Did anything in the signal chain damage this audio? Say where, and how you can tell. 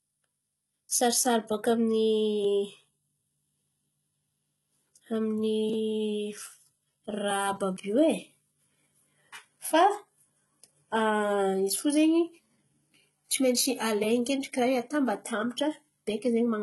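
Yes, at the codec: likely HE-AAC compression, heavy throughout. The spectrogram cuts off sharply near 11.8 kHz, and copied-up treble turns the s sounds gritty and lispy.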